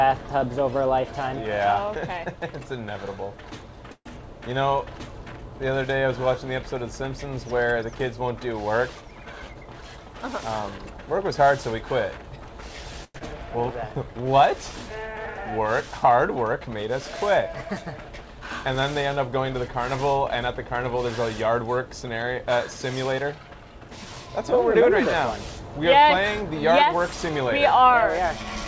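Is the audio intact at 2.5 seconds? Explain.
Yes, the audio is intact at 2.5 seconds, with no dropout, click or other fault at that moment, only the steady band limit of a G.722 call path that leaves nothing above 8 kHz.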